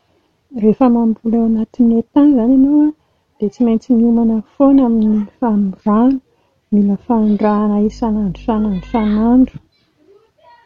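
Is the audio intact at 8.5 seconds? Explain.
No. At 8.5 s the speech carries mains hum, which runs from 7.85 to 9.50 s. The power line leaks into the signal as a steady 50 Hz tone with low harmonics, roughly 20 dB below the speech. Its fixed pitch sets it apart from irregular, broadband handling rumble.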